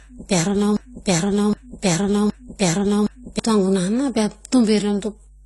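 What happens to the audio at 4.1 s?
At 4.1 s the speech carries a steady 50 Hz mains hum, present from start to end rather than at that moment alone. Power-line current leaking into the signal path through a ground loop or nearby transformer leaves a low, unchanging drone sitting roughly 30 dB under the speech. Unlike rumble or handling noise, it holds one fixed pitch and never drifts or thumps with movement, which marks it as electrical pickup.

The same moment also shows plainly audible codec damage, likely from AAC compression, again across the whole clip. Nothing is left above 11.5 kHz, so the sound is dull, and sibilants and held vowels take on a warbling, fizzy smear as the encoder quantises its frequency lines coarsely and fills or drops bands. That damage fits a low rate around 32 kbps. A simple low-pass filter would dull the top end but leave no such swirling artefacts.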